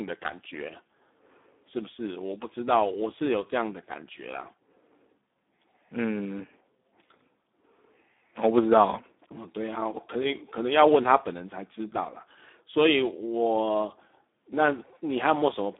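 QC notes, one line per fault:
throughout, Speex codec: the speech has that noisy, hoarse CELP grain you'd know from old VoIP or game chat, and the damage is heavy, which fits a low setting of around 8 kbps where there's barely enough budget for the excitation. The band runs about 250 Hz to 3.6 kHz, so it's thin at the bottom, and there's nothing at all above 3.8 kHz. That's why it sounds so dull and boxed-in.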